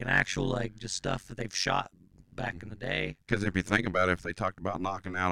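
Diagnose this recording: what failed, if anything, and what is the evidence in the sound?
The speech carries a hard, buzzy flutter from start to finish, a robotic tremolo around 100 Hz, with the level dipping by about 60 dB on every cycle so the sound is nearly chopped. This is overlap-add ripple in a frame-based processing stage. The audio was windowed into frames and resynthesised with an overlap whose windows do not sum to constant gain, so each frame boundary pulls the level down once per frame.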